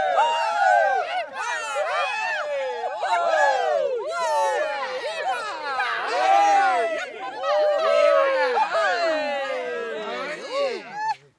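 No technical faults are audible anywhere in this recording of sounds.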